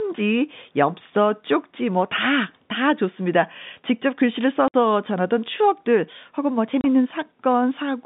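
At 4.68 s the speech drops out for 60 ms, ending at 4.74 s, and at 6.81 s a 30 ms gap runs to 6.84 s. Both are packet loss filled with silence: the receiver had nothing to play and played silence instead. The gap lengths fit a 30 ms packet interval, so the first hole is two packets wide. Each cut has abrupt edges, heard against the narrow 150 Hz to 3.7 kHz telephone band of the G.711 line.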